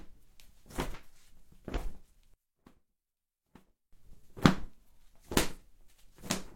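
A short recording of everyday sounds with two kinds of fault. AAC frame loss with concealment occurs twice, at 1.77 to 1.81 s and 5.56 to 5.63 s. Each gap is about 43 ms, which fits one lost frame. The decoder patches it from the previous spectrum, leaving a brief smeared, noisy blip. From 2.34 to 3.93 s the sound drops by about 30 dB and turns faint. The likely cause is one channel inverted, so content common to both channels cancels when they are summed to mono.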